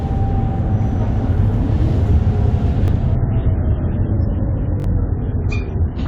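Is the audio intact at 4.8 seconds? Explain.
No. From 4.80 to 4.84 s there's a repeated buffer: fresh audio arrived late, so a roughly 21 ms chunk, consistent with a 1024-sample buffer, played twice more, giving a quick buzzy stutter and skipping around 40 ms. It also sits inside an adaptive stream at a lower bitrate, running from 3.15 s to the end. The connection slowed, so quality suddenly drops with no gap, nothing above 7.6 kHz, and more codec grit, which suggests something like 24 kbit/s.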